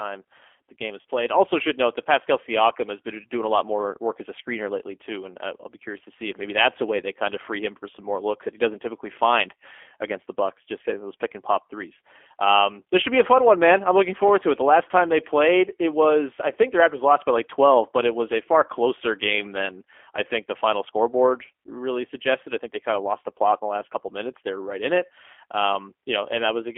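From the first moment the whole clip carries the sound of the G.729 codec. The speech sits in a narrow telephone band, roughly 300 Hz to 3.4 kHz, with nothing bright above. The slightly rough, synthetic texture is plainly audible and points to an 8 kbit/s G.729-type coder. It rebuilds each stretch of speech from a vocal tract filter, a pitch predictor and a few pulses rather than sending the waveform itself.

Just after "the game is", around 1.01 to 1.05 s, there's a 40 ms stretch of VoIP packet loss concealed by the speech codec. This fits four lost 10 ms frames. During the gap the decoder keeps repeating its last pitch and filter settings at falling gain, so the speech turns briefly into a buzzy tone or coloured noise that fades. Because each frame builds on the one before, the speech stays weak or distorted for tens of milliseconds or more after the packets return.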